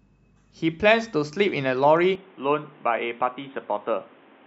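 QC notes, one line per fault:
2.15 to 4.47 s, input switched to a poorer device: The speech abruptly turns dull and boxy, with nothing above 3.8 kHz. It drops roughly 5 dB and gains a new noise floor about 30 dB down. There is no gap. This is likely a change to a narrower-band input.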